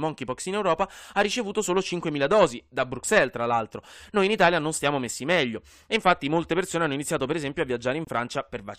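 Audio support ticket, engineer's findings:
Abrupt dropout in the speech at 8.05 s, right after "iniziato per esempio a". Hard cut to silence lasting 44 ms, ending 8.09 s. No timing shift afterward. Corrupt frame muted: bit errors in compressed frames, decoder rejected them, player substituted silence. Gap length fits about two codec frames. Component: decoder/player concealment path.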